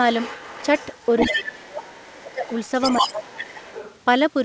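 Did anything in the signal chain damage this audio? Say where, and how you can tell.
Yes. The damage sits in call processing, likely the echo canceller. A second voice leaks through from 0.12 to 1.9 s and again from 2.06 to 3.47 s at only about 5 dB under the talker, then more faintly, about 15 dB down, from 3.63 to 4.0 s. That's the other side's voice leaking through. The far end is coming out of a loudspeaker, getting picked up by the mic, and not being fully cancelled.

Where the two sides overlap, the near talker gets crushed. From 1.39 to 2.44 s the speech drops by as much as about 25 dB, around a second of it affected in all, and from 3.01 to 3.66 s it dips again by about 15 dB over roughly half a second. That's speech suppressed in double talk. The canceller likely can't tell its own talker from the echo, so it turns everything down. The G.722 call path itself is fine, with its top end stopping at 8 kHz as expected.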